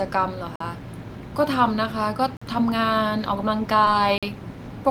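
At 0.56 s, and again at 2.37 s, the program likely failed to fill its output buffer in time, and each time a block of digital silence about 46 ms long replaced the speech. That length fits a missed 2048-sample buffer. The sound drops straight to silence and returns with no fade, and the gap itself is heard as a short hole in the speech.

At 3.85 s, a short concealed packet loss occurs. About 20 ms of the call failed to reach the decoder in time, so the receiver invented a stretch by extending the preceding sound before blending back into the real signal. It is heard as a brief smear or wobble rather than a clean break, and any short consonant falling in that window can disappear.

At 4.18 s, the same buffer fault returns. Another 46 ms block of digital silence cuts in abruptly.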